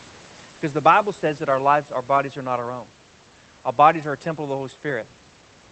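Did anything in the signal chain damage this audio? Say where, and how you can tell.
No, nothing in the chain damaged it.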